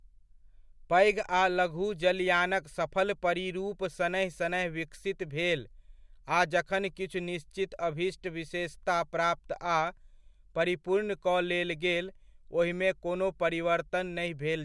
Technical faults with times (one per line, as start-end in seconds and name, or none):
none